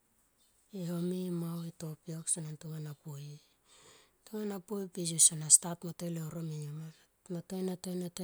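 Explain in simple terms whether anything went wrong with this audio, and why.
Nothing went wrong with this speech recording. At no point does the sound break off, jump or change in a way that would point to a technical problem.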